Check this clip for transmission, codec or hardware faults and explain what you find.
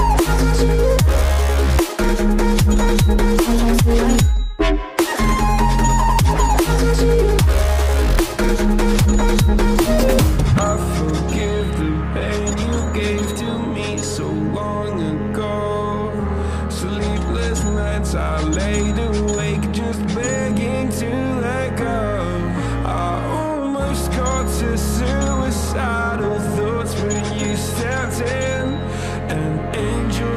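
One transmission fault is present: an adaptive stream dropping to a lower bitrate from 9.48 to 13.48 s. The connection slowed, so the player switched to a lower-bitrate version with no gap. Codec artefacts rise, which fits a step from about 64 to 24 kbit/s Opus.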